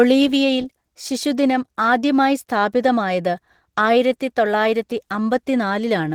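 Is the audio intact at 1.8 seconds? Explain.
No. At 1.8 seconds, as across the whole clip, Opus voice compression is coding the speech with too few bits. The excitation is quantised coarsely, which fits hybrid mode at around 16 kbps, so the speech sounds plainly hoarse, muffled and slightly robotic.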